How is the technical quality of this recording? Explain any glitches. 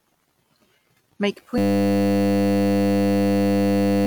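The recording has one serious fault that takes over its second half. From 1.58 s to the end, a system hang loop replays a single 10 ms piece of audio, producing a steady 100 Hz buzz that replaces around three seconds of speech.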